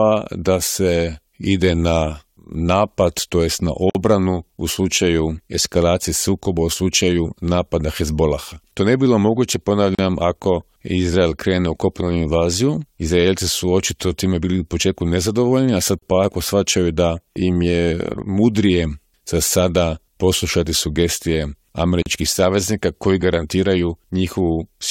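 Silent gaps at joins of encoded pieces open at 3.90 s (52 ms), then 9.95, 15.99 and 22.02 s (37 ms each), six seconds apart. Encoder start delay and end padding were left in, so unlike dropouts the sound resumes exactly where it stopped.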